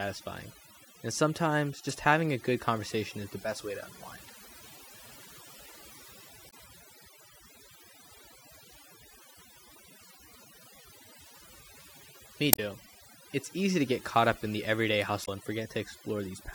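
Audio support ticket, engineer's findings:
Overdone noise removal, throughout the speech. Background pulled down with scattered twinkling specks. Quiet low-level parts of speech removed. Probable component: noise reduction stage set too aggressive. Mechanism: individual frequency bands near the noise estimate are cut hard or gated off frame by frame, taking soft speech detail with them and leaving isolated bands flickering on and off.

Damaged data in a compressed stream, five short chirps or blips. At 1.9 s, between "and sometimes" and "having a good conversation". Also at 6.47 to 6.54 s, 10.16 to 10.18 s, 12.50 to 12.60 s, and 15.22 to 15.29 s, just after "up in the everyday". Probable component: compressed file or stream transport. Mechanism: corrupted frames are misdecoded or dropped, and the decoder loses sync and resumes at the next valid frame header.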